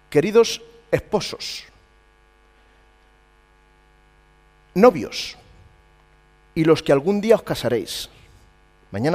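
No technical faults can be heard anywhere in the audio.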